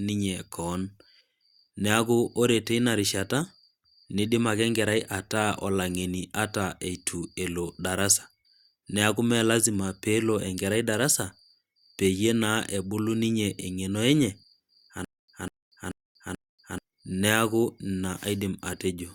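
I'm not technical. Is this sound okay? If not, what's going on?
No, not quite. From about 15.05 to 16.78 seconds there's a stutter with silent gaps: a fifth-of-a-second snippet of speech replays four times, each followed by about a quarter second of dead silence. The player likely stalled, repeating its last bit, so that stretch of speech is lost.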